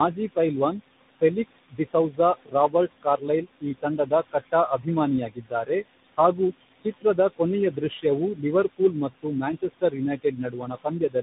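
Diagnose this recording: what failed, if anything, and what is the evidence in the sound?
Call processing, specifically the noise suppressor. This is speech over room noise that sits about 14 dB under the voice, and the suppressor pulls that noise down by about 18 dB in the gaps, then lets it back up under each phrase. So the background pumps in and out with the talker.

Codec stage: tandem speech coding. The top end stops dead at about 3.8 kHz, and the voice has that layered roughness and smeared, burbly quality you get when one speech coder feeds another. It sounds like a low-rate narrowband cellular codec, passed through a plain PCM leg and then re-encoded with CVSD, so two speech coders in a row. The second one is chewing on the first one's artefacts, which is why it's grittier and more muffled than either would be alone.

Same suppressor, different symptom: speech cut by the noise suppressor. 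In five stretches it mistakes parts of the speech for noise and ducks them. Between 1.21 and 4.87 s it eats around a second's worth of material in total, dropping by up to about 21 dB. The stretch from 5.26 to 5.7 s loses a few hundred milliseconds, up to about 17 dB. From 6.82 to 7.4 s a brief bit goes, up to about 19 dB. Another few hundred milliseconds disappear between 7.72 and 8.43 s, up to about 12 dB. From 9.22 s to the end, roughly 0.7 s is lost, up to about 20 dB. In all of these, the affected speech comes out swallowed or faint.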